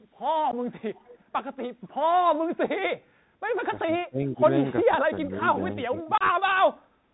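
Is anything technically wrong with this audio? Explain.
Yes. The speech has four distinct problems.

Throughout, the audio has passed through the Bluetooth CVSD headset codec, a narrowband scheme that sends one bit per sample to nudge the waveform up or down with an adaptive step, which fits a 64 kbps headset link. Nothing above 4 kHz survives, so the sound is muffled. Sharp, loud high content outruns the step size and distorts, sibilants turn scratchy, and a granular hiss sits under everything. The damage is plainly audible.

There is unconcealed Bluetooth headset packet loss at 0.51 to 0.54 s and again at 6.18 to 6.22 s. Voice packets between headset and phone went missing and nothing filled the gaps. The first hole is 15 ms, which fits about two lost packets. The second is 30 ms, which fits about four. Each drops out abruptly, with hard edges that can click, and the sound can return briefly quieter afterwards.

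An echo leak appears from 0.94 to 1.23 s and briefly at 6.00 to 6.04 s. The likely cause is that one side played the call on a loudspeaker and its echo canceller failed to remove everything its microphone picked up, so a copy returned. It arrives 389 ms late and sits well below the main speech, roughly 25 dB down in the first stretch and around 20 dB down in the second. It is faint.

Speech suppressed in double talk occurs at 3.86 to 4.49 s, 4.85 to 5.37 s and 5.89 to 6.48 s. With both parties talking at once, the echo canceller likely could not tell the local talker from loudspeaker echo and turned the signal down. The speech dips sharply, by roughly 20 dB in the first and third passages and around 25 dB in the second. It fades or cuts out in pieces over about half a second, then somewhat less in each later passage.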